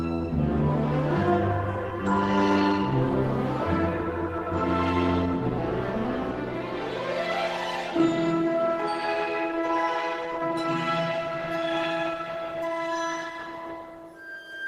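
No technical faults are audible.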